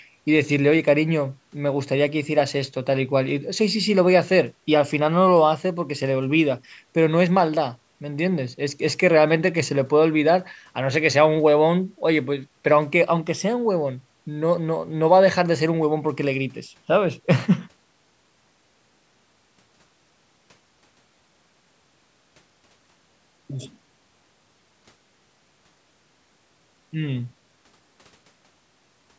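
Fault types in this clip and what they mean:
No faults detected.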